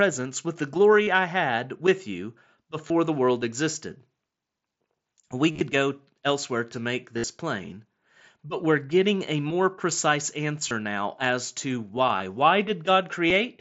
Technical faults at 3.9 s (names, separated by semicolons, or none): none